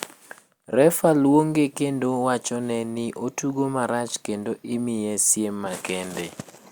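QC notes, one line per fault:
No faults were heard anywhere in the speech.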